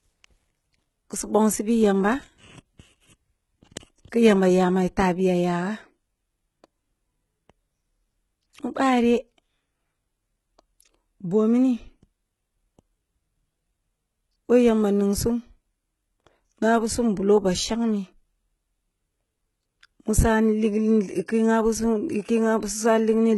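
From start to finish the speech carries the sound of heavy HE-AAC compression, which is the likely cause. The treble reaches high but sounds synthetic: above a crossover the top end has been rebuilt from copied lower bands instead of coded, so its harmonics don't line up with the real ones. S sounds come out gritty and lispy, and nothing survives above about 11.8 kHz. The damage fits a very low bitrate, something like 16 kbps.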